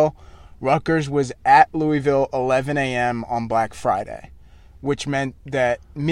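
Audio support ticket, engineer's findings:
Listened to the full speech recording; nothing stood out, no findings to log.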